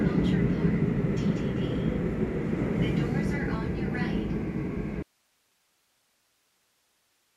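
A recording of sounds that cuts out abruptly at 5.03 s and never recovers: from that point to the end, all that remains is a thin bed of hiss, sitting somewhere around 45 dB below the level the sound had before. The switch is sudden, with no fade or natural tail, which marks it as an audio dropout to a faint residue. The likely cause is a break in the signal feeding the chain while everything downstream stayed live, so only the path's own noise carries on.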